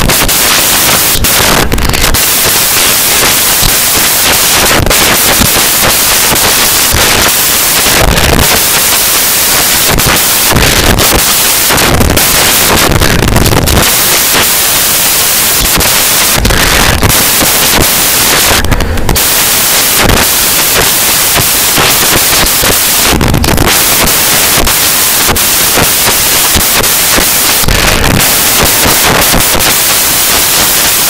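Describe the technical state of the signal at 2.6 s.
At 2.6 s the speech sits under samples built from the wrong bytes, present across the whole clip. Misaligned or swapped bytes make the low bits dominate, giving loud, harsh broadband noise. The spectrogram shows flat broadband energy, and the waveform looks like dense hash.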